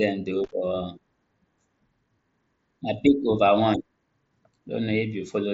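A short burst of irregular crackle and scratching breaks into the speech from 0.44 to 0.52 s: loose connector crackle, where a worn or dirty contact rapidly makes and breaks, chopping the signal through the wideband mSBC headset path.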